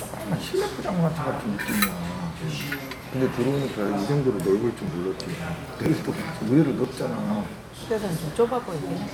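This is a recording of everyday sound with a run of small skips at 1.92, 2.90, 4.88, 5.86, 6.85 and 7.83 s, caused by overlap between stream segments. The spacing fits one-second segments whose timestamps overlap slightly. The player trims each overlap, cutting out a few milliseconds of audio that wasn't actually duplicated, so the waveform jumps and you hear a tiny tick or skip at each boundary.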